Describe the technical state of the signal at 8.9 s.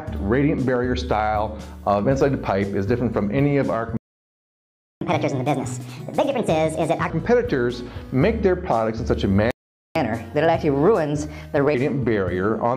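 At 8.9 s the signal is intact, with no audible fault at that moment.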